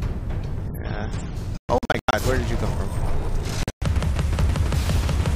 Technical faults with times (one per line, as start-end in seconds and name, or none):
1.57-2.13 Bluetooth dropout
3.63-3.82 Bluetooth dropout